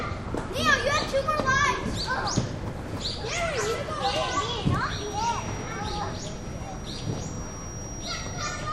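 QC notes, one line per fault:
4.78–8.72 s, feedback whistle: a thin, steady tone near 5.7 kHz sits about 20 dB under the sound, swelling and fading slowly in level until the end. Its likely cause is the loudspeaker-to-microphone loop held just at the edge of feedback, sustaining one frequency without building up.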